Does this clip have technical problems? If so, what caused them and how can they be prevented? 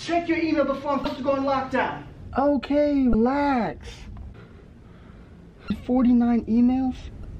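Yes. Damaged data in a compressed stream shows up as four short glitches, at 1.02 to 1.05 s, 3.11 to 3.14 s, 5.67 to 5.70 s and 7.21 to 7.27 s, each about 30 ms except the last at about 50 ms. At each point the compressed bytes were corrupted or lost. The decoder misreads those frames, loses its place in the stream and has to hunt for the next valid frame header, producing a brief chirp or blip before the sound resumes. Prevent it by sending the stream over a checked, reliable transport and verifying file integrity with checksums before decoding.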